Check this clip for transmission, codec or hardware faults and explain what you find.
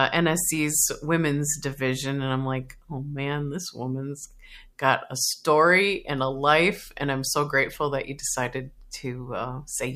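No transmission, codec or hardware faults found here.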